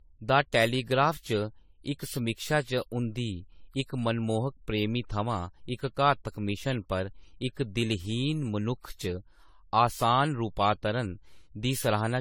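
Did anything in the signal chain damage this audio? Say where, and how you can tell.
Yes, at the codec stage. There's generation loss throughout the speech, swirly and hollow with smeared attacks. That's likely from around ten AAC re-encodes, each requantising on a shifted frame grid.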